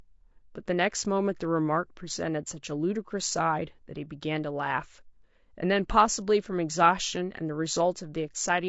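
The speech sounds rough and grainy from start to finish, with noise filling the gaps between voice harmonics and a dulled top band. The likely cause is low-delay AAC compression: AAC-ELD's short frames resolve pitch poorly at a bitrate near 32 kbps.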